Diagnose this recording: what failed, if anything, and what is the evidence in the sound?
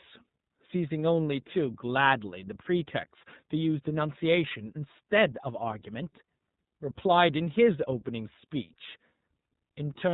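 The failure sits at the codec stage: iLBC coding across the whole speech clip. Nothing above 4 kHz survives. The voice sounds plainly rough and synthetic. Each 30 ms frame's excitation is coded independently, and the coarseness fits a 13.33 kbps mode.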